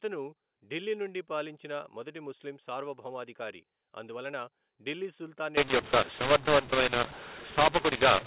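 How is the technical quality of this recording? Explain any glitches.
The recording carries one serious glitch in its final stretch. From 5.57 s, just after "ముస్లిం సార్వభౌమాధికారి అందువలన ఢిల్లీ", until the end at 8.26 s, the speech turns harsh and gritty, with loud parts crunching and quiet gaps filled with hiss. This is mu-law and A-law mixed up. The telephone-band audio, limited to 4 kHz at 8 kHz sampling, was coded with A-law but read back as mu-law, so sample levels are mapped wrongly and near-silent values jump well above zero.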